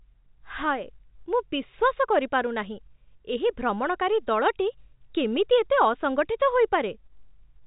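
This is speech carried over ordinary G.711 telephone coding with its usual narrow phone-line sound, and nothing in it has gone wrong.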